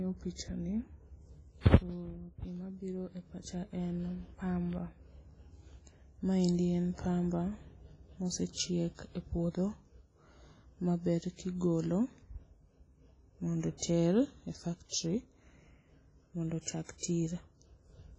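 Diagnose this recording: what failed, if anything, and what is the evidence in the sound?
Codec stage: heavy WMA compression throughout, with washy, ringing speech, hiss that breathes with the signal, and nothing above 10.6 kHz, likely a low bitrate near 24 kbps.

Codec stage: pre-echo from 16.98 to 17.03 s, a 50 ms hiss before a smeared attack, as block-wide quantisation noise fills the preceding quiet.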